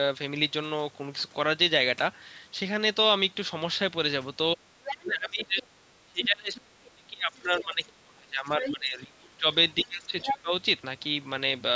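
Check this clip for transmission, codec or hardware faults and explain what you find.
Two call-processing faults affect the speech between about 4.5 and 10.5 seconds, both likely caused by the echo canceller handling double talk.

Speech suppressed in double talk: from 4.55 to 9.47 s, and again from 9.83 to 10.52 s, the talker's speech dips and breaks up, falling by around 30 dB at its deepest in the first stretch and around 20 dB in the second. This is likely because, with both parties talking at once, the echo canceller could not tell the local voice from the loudspeaker echo and attenuated both.

Other side's voice leaking through: scraps of a second voice can be heard at 4.85–5.12, 5.61–5.65, 6.55–6.59, 8.6–8.73 and 10.2–10.38 s. They range from faint, roughly 20 to 25 dB under the talker, to nearly level with the speech at 10.2 s. The likely cause is that the far-end voice played on the loudspeaker was not fully removed from the microphone signal.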